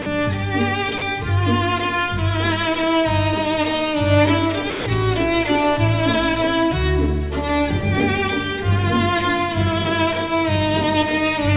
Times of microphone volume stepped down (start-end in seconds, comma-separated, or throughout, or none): none